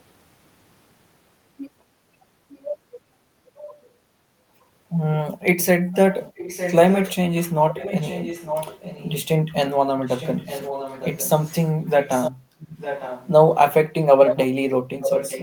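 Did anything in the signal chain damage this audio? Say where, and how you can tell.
Yes, in call processing. An echo leak is audible from 5.92 to 7.15 s, 7.69 to 9.25 s, 10.03 to 11.54 s, 12.01 to 13.28 s, and 14.23 s to the end of the clip. A copy of the speech trails it by 907 ms. It sits well below the speech, about 10 to 15 dB down, and rises to only about 5 dB down at the end. The likely cause is a far-end loudspeaker whose echo canceller let some of the returned signal through.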